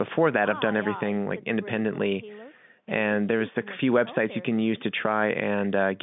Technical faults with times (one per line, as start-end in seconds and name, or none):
none